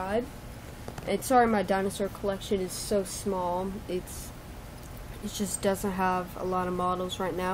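No technical faults can be heard anywhere in the recording. The sound carries on without a break or disturbance from beginning to end.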